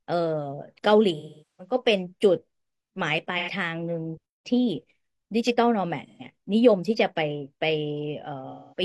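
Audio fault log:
1.16–1.74 s, 3.38–3.49 s, 6.06–6.23 s, 8.50–8.82 s: AAC frame loss with concealment. The decoder patches each gap from the last good spectrum, producing a smeared, noisy, phasey hold rather than a hard silent dropout. The longest loss, about 430 ms, sags before recovering.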